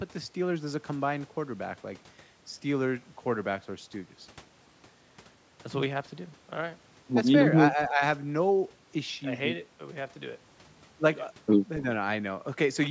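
From 7.71 to 8.02 s the speech sinks in level, falling by roughly 10 dB at its deepest, with about a fifth of a second of it pulled down. This is likely speech suppressed in double talk, where an echo canceller could not separate the near talker from the overlapping far-end echo and attenuated the near talker too. On a waveform the envelope pinches inward there; a spectrogram shows the energy below the 8 kHz ceiling fading.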